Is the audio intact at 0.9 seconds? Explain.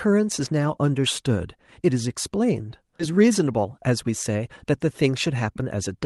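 Yes, the speech at 0.9 seconds is intact, with nothing at that moment beyond the ordinary character of the call codec that carried it.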